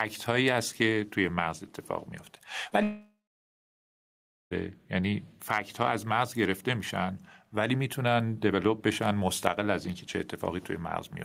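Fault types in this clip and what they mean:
gain pumping: The level swings by roughly 5 dB throughout the clip. This is likely a fast compressor or limiter working against a microphone gain set far too high. Because the level moves steadily with the speech rather than breaking off, it differs from the network faults: nothing is missing, the dynamics are simply squashed and loud and soft passages sit closer together.
short concealed packet loss: At about 2.69 to 2.73 s roughly 20 ms of speech failed to arrive, and the receiver patched the gap by extending the preceding sound before blending back into the real signal. It comes across as a brief smear or wobble rather than a silence. Unlike the dropout that follows, the patch is short enough that the speech flows on almost unbroken, though a quick consonant there can be swallowed.
long network dropout: From 2.83 s to 4.53 s about 1.7 s of speech never arrived, most likely a network outage. 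The receiver first stretches the last sound into a fading buzz or hiss, then gives up, leaving about 1.4 s of silence. Speech resumes at 4.53 s with the missing stretch simply gone. What separates it from the short concealed loss is that this gap is long enough for the fill to decay into audible silence.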